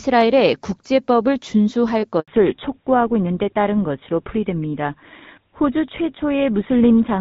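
Handover gap, 2.20 to 2.28 s: the call switches from one network to another, and for 80 ms no speech frames reach the receiver. The speech cuts away almost at once and leaves a short hole of silence, and whatever was said during it is gone.

Fallback to narrowband, from 2.28 s to the end: once the new link takes over, the HD Voice connection, whose wideband sound is clear before the gap and fits AMR-WB at around 12.65 kbit/s, drops to an older narrowband codec that sounds like GSM full rate. Nothing above 4 kHz survives, so the speech turns duller and rougher for the rest of the clip.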